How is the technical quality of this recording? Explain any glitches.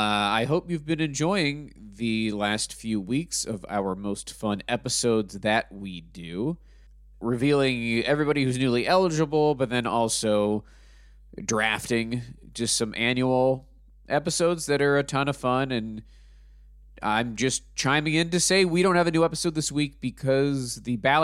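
The recording is marred by one continuous fault. Mains hum runs throughout as a steady low drone at 50 Hz, about 25 dB beneath the speech, so it sits audibly under every pause. A ground loop or nearby transformer is leaking power-line current into the signal path, imprinting that fixed tone and its low harmonics.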